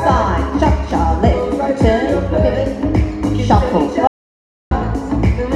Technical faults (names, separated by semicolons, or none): audio dropout to silence